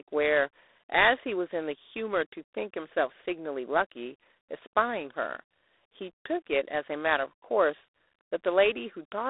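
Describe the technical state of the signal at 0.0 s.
A harsh, rasping hiss rides on the speech and tracks its level, within a narrow telephone band of about 300 Hz to 3.7 kHz with nothing above 3.8 kHz. This is G.726 ADPCM damage, present throughout. Coding only a few bits of prediction error per sample, consistent with 24 kbit/s, leaves plainly audible quantisation noise.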